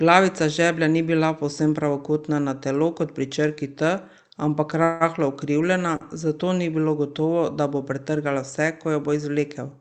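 Speech carried over a WebRTC call path, where the highs stop near 8 kHz, consistent with Opus at around 48 kbps. At 4.83 to 5.03 s packets were likely held up and the jitter buffer ran dry, causing a call audio freeze: the last sound is carried on as a fading buzz for about 170 ms, then speech resumes where it stopped, with nothing lost. At 5.96 to 6.04 s a short stall from a late packet makes the receiver stretch the previous sound by about 42 ms, a brief held tone with a slight buzz before the audio continues.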